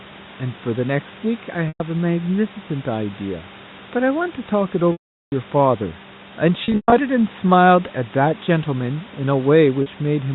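Packet loss with pitch repetition shows up at 1.68 s, 4.92 to 5.32 s, 6.64 to 6.92 s and 9.82 s. The receiver loops the last pitch period over missing packets. Short gaps of 40 to 120 ms sound buzzy and held, while the 400 ms gap fades to silence before the speech cross-fades back.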